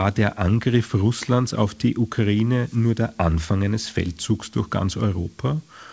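No faults can be heard, and the audio carries the band-limited character of a wideband call codec, with nothing above 8 kHz, which fits G.722 at 64 kbps.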